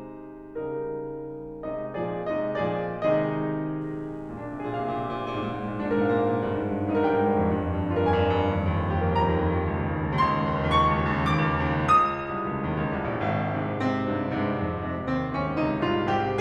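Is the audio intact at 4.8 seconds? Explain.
No, unshielded or switching-contaminated wiring injects 60 Hz mains buzz from 3.81 to 8.92 s, its harmonics adding a steady, raspy buzz roughly 25 dB under the music.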